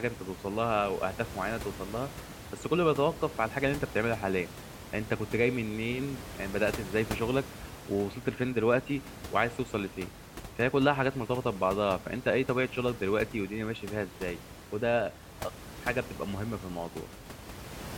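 Nothing here points to a technical fault; the speech simply carries on, with the room's own background noise sitting about 14 dB beneath it, as you'd expect from a microphone in a real space.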